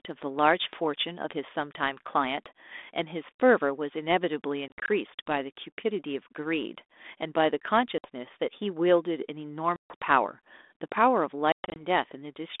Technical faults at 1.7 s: none

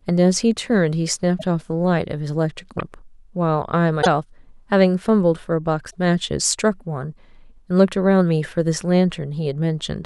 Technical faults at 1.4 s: broken MP3 bit reservoir

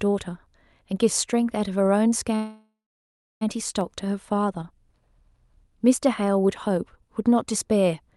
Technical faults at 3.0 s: call audio freeze

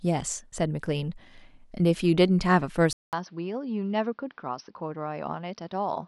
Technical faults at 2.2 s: none

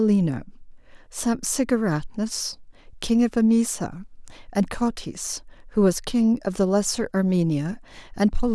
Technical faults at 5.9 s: none

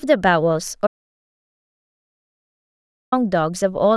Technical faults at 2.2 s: audio dropout to silence

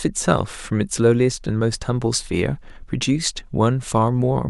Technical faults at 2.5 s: none

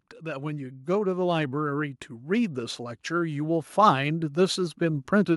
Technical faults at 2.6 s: automatic gain rising

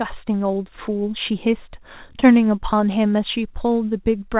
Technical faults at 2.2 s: short concealed packet loss

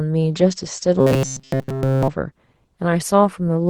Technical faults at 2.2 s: call bitrate drop

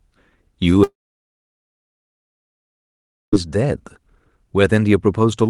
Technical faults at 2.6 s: long network dropout

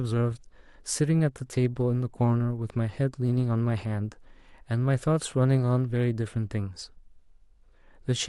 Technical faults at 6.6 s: resampler restarted on every block

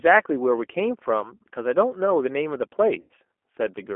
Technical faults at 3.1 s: G.729 codec; VoIP packet loss concealed by the speech codec

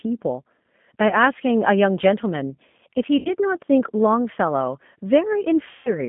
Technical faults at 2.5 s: G.729 codec

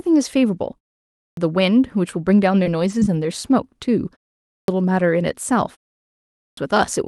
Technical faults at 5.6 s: none

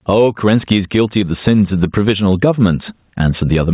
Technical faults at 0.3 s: gain pumping

